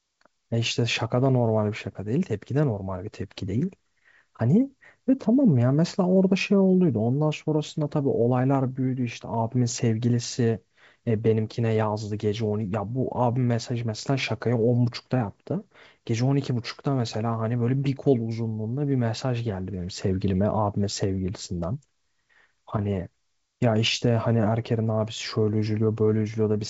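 No technical faults can be heard in this speech. It comes through G.722 wideband telephone coding at 64 kbit/s, so nothing reaches above about 7.7 kHz, and any trace of the coding in the upper band is faint at most.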